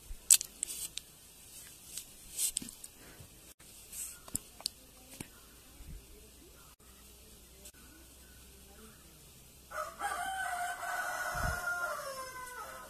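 From start to finish the speech sounds swirly, smeared and hollow, with nothing above 14.3 kHz, likely generation loss from around ten passes through something like 64 kbit/s AAC-LC. Three blocks of digital silence cut in at 3.52 s for 80 ms, 6.74 s for 60 ms and 7.70 s for 40 ms, each a short hole where the sound cuts out and back with no fade.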